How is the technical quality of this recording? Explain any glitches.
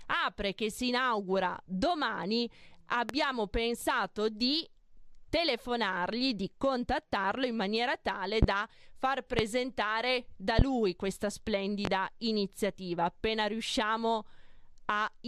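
The recording has five loud pops, at 3.09–3.13, 8.43–8.46, 9.39–9.43, 10.59–10.63 and 11.85–11.89 s. Each is a single sharp pulse roughly 20 dB above the speech, nearer 25 dB at 9.39 s. Each is likely a voltage spike from a switch, connector, static discharge or driver glitch, shaped by the downstream circuitry into a brief thump while the speech continues underneath.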